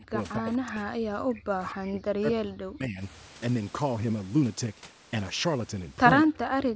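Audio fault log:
0.00 to 0.17 s, 0.35 to 3.02 s and 6.25 s to the end: speech suppressed in double talk. The speech ducks deeply, by roughly 40 dB at worst, likely because an echo canceller could not separate the near-end speech from the overlapping far-end echo and attenuated the near-end speech along with it.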